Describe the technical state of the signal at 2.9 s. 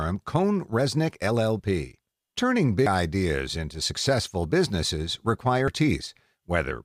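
Around 2.86 to 2.90 s there's a short burst of damaged data in the compressed stream. The decoder hits corrupted frames, loses sync and hunts for the next valid frame header, so you get a brief glitch there, a chirp, squawk, click or tiny gap.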